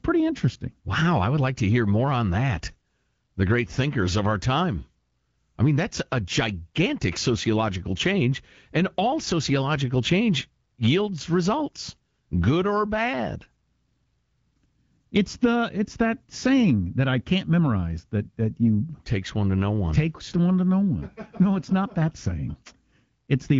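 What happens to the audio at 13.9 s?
Nothing goes wrong at 13.9 s: the speech there comes through intact, with only the band-limited sound of the AMR wideband (HD Voice) codec that runs through the whole clip.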